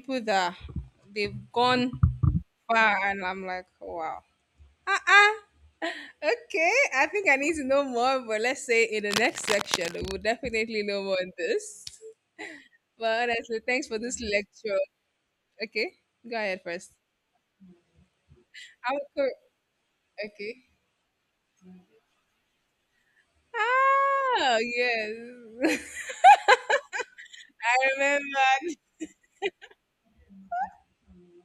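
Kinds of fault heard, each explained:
Cable scratch noise: Dense, uneven bursts of scratching and rustling sit over the speech from 9.10 to 10.11 s, after "but let's say in" and before "definitely know more". They are loud, about 5 dB below the speech. A worn cable or connector being moved is the likely cause.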